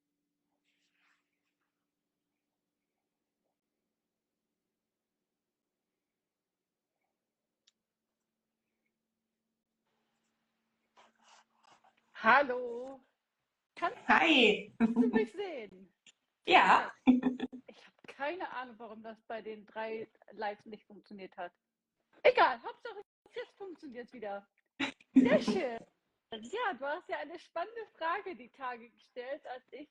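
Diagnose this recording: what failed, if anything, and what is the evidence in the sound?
The failure is a gap between stream segments at the playback stage. Hard-edged silences occur at 1.59, 3.60–3.62, 5.62, 7.63, 9.63–9.66, 11.66, 13.67–13.69 and 15.69–15.72 s, lasting 4–24 ms and spaced every 2 s. Mismatched segment timestamps leave holes that the player fills with silence. Unlike dropouts, the sound resumes intact with nothing missing.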